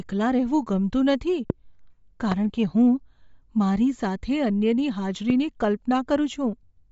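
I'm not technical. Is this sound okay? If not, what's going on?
No. The speech has a grainy, breathy edge and lacks its crispest top sounds throughout, likely from Bluetooth LC3 compression. Unlike plain muffling, it adds a rough, swishy texture. Three loud pops, sudden sharp bursts each lasting a few hundredths of a second, land at 1.50, 2.32 and 5.30 seconds while the speech carries on underneath. Being single isolated jolts rather than a steady crackle, they likely come from a connection or switch glitch.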